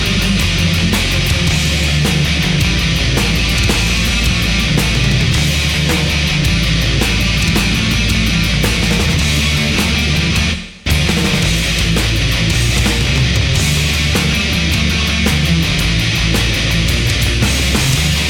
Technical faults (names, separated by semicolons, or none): none